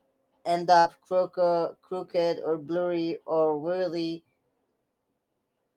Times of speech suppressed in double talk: none

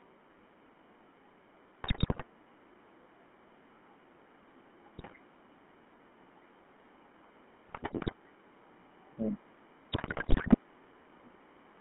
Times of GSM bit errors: 1.84-2.24, 4.98-5.15, 7.68-8.14, 9.92-10.57

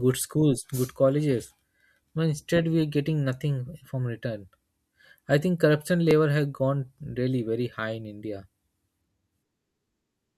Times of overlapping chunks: 2.10, 6.11

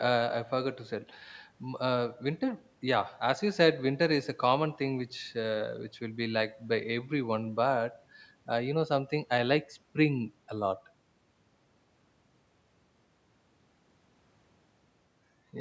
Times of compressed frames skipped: none

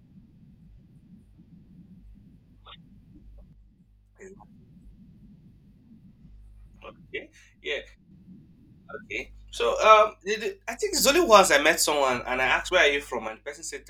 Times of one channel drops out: 3.53-4.36, 7.18-8.11, 10.08-10.93, 13.28-13.90

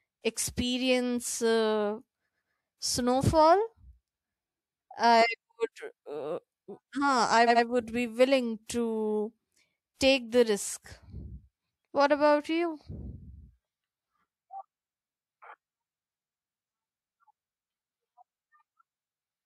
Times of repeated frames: 2.26-2.52, 7.47-7.64

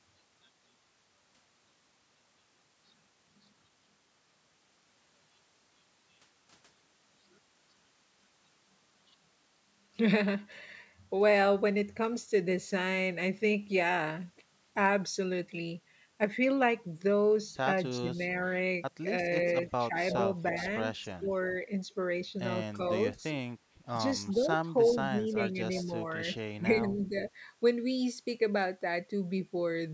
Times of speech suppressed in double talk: 17.98-18.23, 19.88-19.96, 21.21-21.55, 22.76-22.82, 24.34-27.16

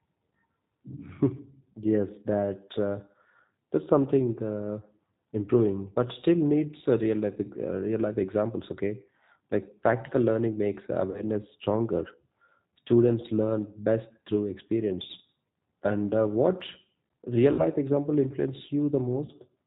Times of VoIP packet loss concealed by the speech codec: 11.11-11.23, 17.53-17.66, 19.25-19.31

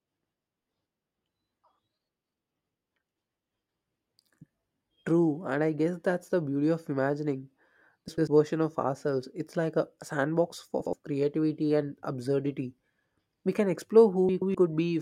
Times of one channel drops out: none

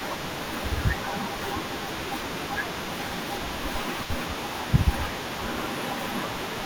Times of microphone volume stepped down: none

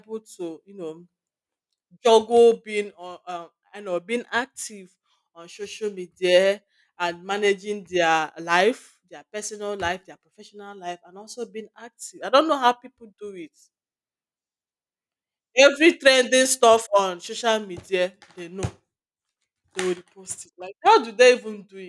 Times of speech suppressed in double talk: none

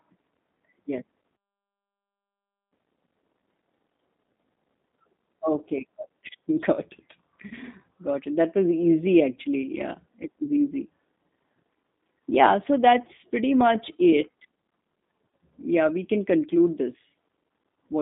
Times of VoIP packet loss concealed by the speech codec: 7.48-7.55, 15.29-15.32

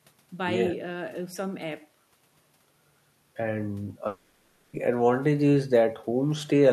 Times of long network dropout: 4.07-4.75

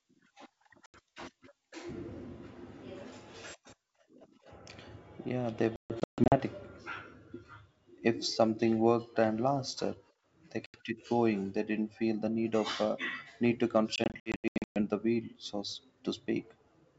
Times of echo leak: none

